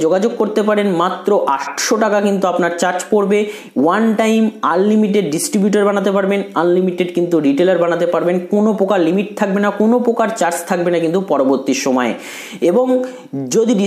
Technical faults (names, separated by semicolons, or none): none